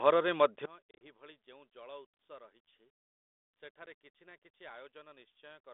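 Speech over what sounds like a 32 kbit/s G.726 line, band-limited to roughly 250 Hz to 3.6 kHz, with two problems. From 0.66 s to the end, the summed level drops by about 24 dB and the centred speech nearly disappears, leaving a faint residue. That's most likely one channel inverted: with one side's polarity flipped, everything common to both channels cancels in mono. The second problem is packet loss on an ADPCM call. Between 0.91 and 1.07 s there's a cluster of short hard-edged dropouts, about 80 ms lost in total over roughly 100 ms, with the longest gap near 30 ms. That fits around seven lost packets. Each hole is filled with silence, and the decoder's predictor and step size come back out of step with the sender's, so the speech re-enters slightly wrong before settling. A single 10 ms hole at 3.86 s does the same thing.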